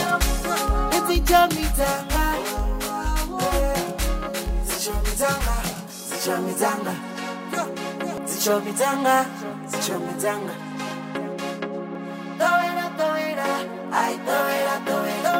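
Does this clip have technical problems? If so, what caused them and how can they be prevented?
Yes. From 1.52 to 6.25 s there is channel delay (comb filtering): one channel arrives around 20 ms late, and summing to mono cancels shared content at regularly spaced frequencies starting near 20 Hz, giving a rough, slightly doubled sound. Keep channels sample-aligned before any mono fold-down.

Brief blips at 8.18 s and 11.95 s come from damaged data in a compressed stream. Corrupted bytes made the decoder misread frames and resynchronise at the next header. Use checksummed transport and verify files after transfer.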